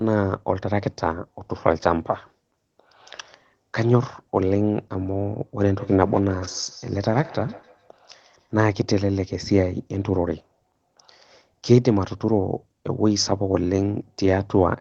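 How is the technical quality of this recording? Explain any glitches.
There's one real glitch, a feedback echo between two devices, running from about 5.78 s to 8.55 s. The sound is coming back at you roughly every 150 ms or so, each pass thinner and more ringy, peaking about 19 dB under the speech. That's what you get when a second device in the room plays the call out loud and the other device's mic picks it back up; the echo canceller only knows its own speaker, so the loop slips through. Everything sits below 8 kHz, which fits a low-bitrate Opus call.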